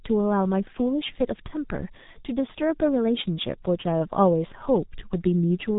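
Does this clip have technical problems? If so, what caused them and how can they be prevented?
Yes. Throughout the speech there is heavy G.723.1 codec damage: nothing passes above 3.8 kHz, and the slow 30 ms frame-based voice model leaves a hoarse, smeared texture with blurred consonants, which fits a roughly 6 kbit/s stream. A plain low-pass filter would muffle without that roughness. Prevent it by negotiating a wideband, higher-bitrate codec such as Opus.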